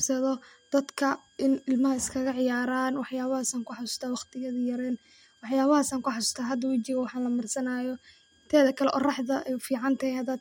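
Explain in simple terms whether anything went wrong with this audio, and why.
Running quietly under the speech for the whole clip is a thin, high whistle, wandering between about 1.6 and 1.7 kHz. That's a switching supply whistle: a power supply somewhere in the chain is switching at a rate slow enough to hear, and the tone shifts a little as the load on it changes. It sits well below the speech, faint but steady from start to finish.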